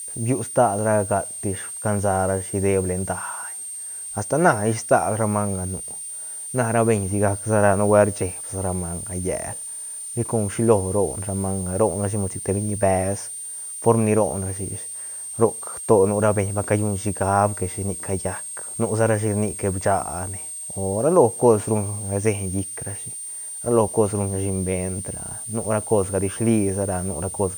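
A switching supply whistle runs under the speech for the whole clip: a thin, high tone wandering between about 8.6 and 9.0 kHz, sitting roughly 10 dB below the speech. A power supply is cycling at an audible rate. On a spectrogram it appears as a narrow horizontal line that never breaks through pauses.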